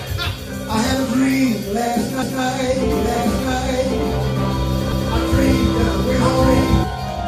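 At 2.22 s the sound stutters. This is overlapping chunks. Audio handled in blocks of about 2.5 s starts each block early, so 200 ms plays twice at the join. It repeats at 4.92 s, a regular click-and-repeat.

From 2.90 s to 6.84 s there is a doubled audio track. A second full-band copy trails about a second behind, at roughly equal loudness, with no room colour. It cuts in and out abruptly. It is likely a slower second capture path mixed back in.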